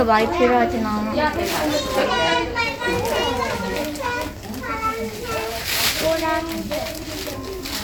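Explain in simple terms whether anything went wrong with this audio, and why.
Nothing went wrong here: the sounds in this recording come through intact, with no technical faults anywhere along the way.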